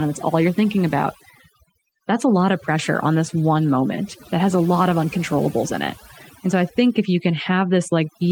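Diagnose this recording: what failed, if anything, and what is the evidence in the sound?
Overdone noise removal runs through the whole speech recording. Pauses fall to near silence with twinkling specks, and quiet parts of the voice drop out with the noise. Unlike low-bitrate codec swirl, the damage clusters where quiet speech sits near the noise floor.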